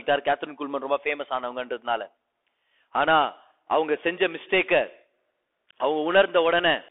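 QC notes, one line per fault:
Throughout: Bluetooth CVSD headset codec. The speech is confined to roughly 300 Hz to 3.5 kHz, and the damage is plainly audible. Sibilants turn scratchy, loud bright sounds distort where the one-bit up/down steps cannot keep pace, and a granular hiss sits under everything, which fits a 64 kbps CVSD link. That hiss and slope-overload grit set it apart from a clean telephone-band filter, and there is none of the warbly, watery smearing a perceptual codec gives.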